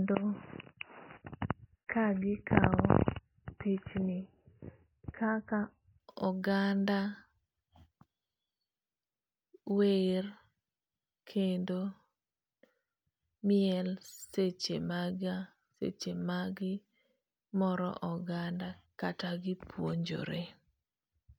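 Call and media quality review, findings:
Speech band-limited 0.0–6.0 s: nothing above 3 kHz, dull and muffled, stronger codec artefacts. Abrupt step to full bandwidth at 6.0 s, no gap or dropout. Component: adaptive stream player, starting at a low bitrate.

Mechanism: player opened on a low-bitrate rendition for fast startup, then switched up once throughput was measured. Sound fits roughly 16 kbit/s MP3 stepping to 128 kbit/s MP3.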